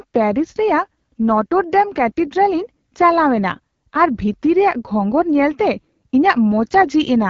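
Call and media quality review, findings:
AMR wideband (HD Voice) codec running at a low-rate mode across the whole speech clip. Damage plainly audible throughout: rough, raspy texture on the speech, consistent with a rate near 8.85 kbit/s, one of the two bottom modes. Component: the codec's pulse-excited vocal tract model, starved of bits, cannot track fine spectral detail. Upper band above 6.4 kHz is synthetic, noise-shaped fill. Hard ceiling with no content above 7.5 kHz.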